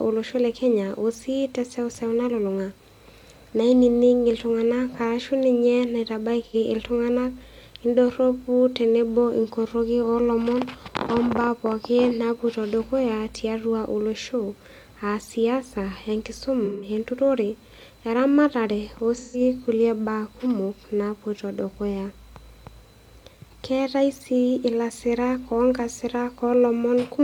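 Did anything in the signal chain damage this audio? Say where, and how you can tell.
Yes. The speech turns briefly smeared and phasey three times, at 6.45 to 6.55 s and then for longer stretches at 16.65 to 16.89 s and 19.17 to 19.40 s. That is AAC frame loss with concealment at the codec stage. Each time, compressed frames went missing and the decoder rebuilt the gap from the last good spectrum rather than true signal. The first gap, about 85 ms, fits two lost frames. The later ones, about 171 ms each, fit four.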